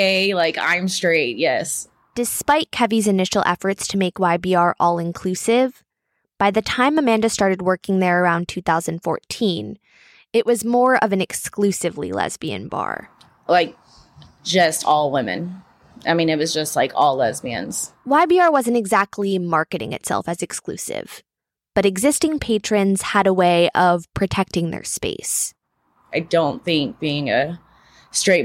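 No technical faults turn up anywhere in this recording, so there's nothing to flag along the way.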